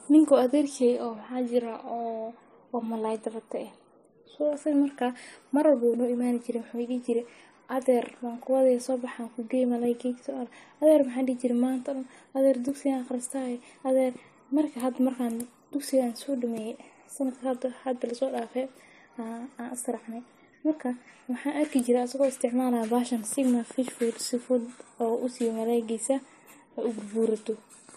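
From start to finish the speech carries a stacked set of compression artefacts, and the likely cause is transcoding between lossy codecs. There's a smeary, swirly quality typical of a low-rate MP3 pass (something around 40 kbit/s would fit), and on top of that a second layer of AAC-style graininess, as the later encoder wasted bits re-coding the first one's damage. Nothing survives above 14 kHz.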